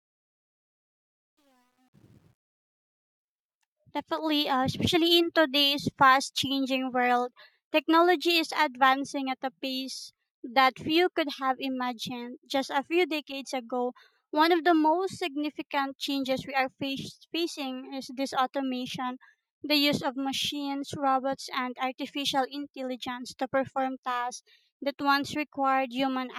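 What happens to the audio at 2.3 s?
At 2.3 s the sound is gritty. It sits inside the worst stretch, 0.0 to 2.49 s, of truncation distortion on a fade that runs until 3.19 s. The fade's gain stage keeps too few bits and adds no dither, which points to roughly a 10-bit stage. At these low levels the waveform collapses into a few coarse square steps.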